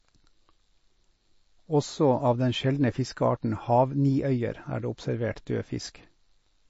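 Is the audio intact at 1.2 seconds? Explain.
No. At 1.2 seconds, as across the whole clip, the speech carries plainly audible damage, likely from MP3 compression. Nothing is present above 7.6 kHz, so sibilants sound dull and clipped off. Under a tight bit budget, which fits a low bitrate around 32 kbps, the encoder discards the top band and zeroes weak frequency lines that flicker between frames. That flicker gives the speech a watery, swirling texture, with smeared consonant onsets.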